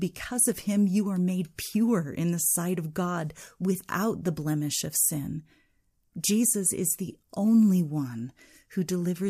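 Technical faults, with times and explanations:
6.52 s overlapping chunks: just before "is the only one", about 12 ms of the speech plays twice where one 4.0 s chunk hands over to the next, giving a brief stutter-click. Unlike a dropout, nothing is missing; the join repeats audio rather than skipping it.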